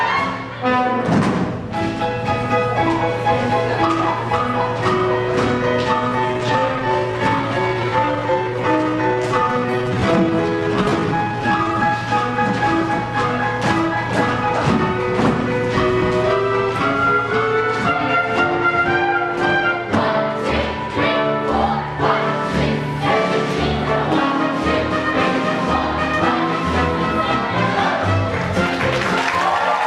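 From 6.03 to 11.95 s there's a time-stretched section: the pace suddenly drops to about 0.73 of normal while the pitch holds steady, so it drags. That's likely software stretching the audio by repeating short slices to fill time.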